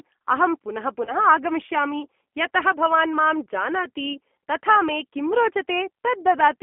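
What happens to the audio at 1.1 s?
Just after "अहं पुनः", from about 1.05 to 1.15 s, there is VoIP packet loss concealed by the speech codec. Around 20 ms of audio, which fits a single lost packet, is missing. Rather than falling silent as a plain dropout would, the decoder stretches the last pitch and filter into a short buzzy tone or coloured noise that fades, and the sound stays weak for a moment after it resumes.

Underneath this runs the G.729 codec at 8 kbit/s, confined to a line band of about 200 Hz to 3.4 kHz. Because it rebuilds speech from a vocal tract model and a few pulses per frame, it adds a rough, slightly synthetic grain. That grain sets it apart from a simple telephone band-limit, which would only dull the top end.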